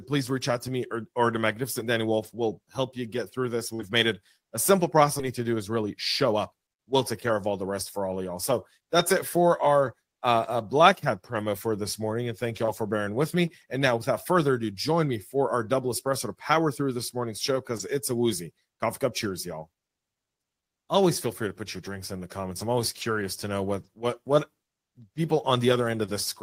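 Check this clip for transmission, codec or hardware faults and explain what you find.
There's one fault here, a jitter buffer speed-up. From 6.32 to 7.47 s the speech runs about 6% fast at unchanged pitch, as the receiver trims pitch-period slivers, around 70 ms in total, to drain excess buffered delay. It sounds briefly hurried.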